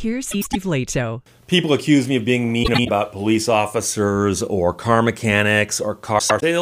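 Frames out of order: adjacent blocks of about 105 ms were decoded in swapped order at 0.31–0.56 s, 2.63–2.89 s (after "accuse me of being"), and 6.19–6.43 s. Each stretch plays halves exchanged, a garbled flutter, no time lost.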